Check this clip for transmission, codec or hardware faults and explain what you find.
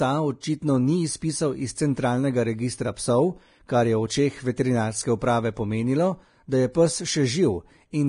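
One fault affects the whole clip, from start to finish. The speech sounds dull and closed-in, with nothing above 10.6 kHz, even though the file is a roomy MP3. This is likely low-bitrate audio saved at a high bitrate: a lean earlier encode discarded the top band and left its artefacts, and the later generous MP3 encode cannot bring either back.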